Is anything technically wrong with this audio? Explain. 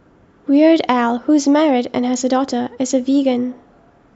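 No, the signal shows no technical faults that a careful listener would pick out.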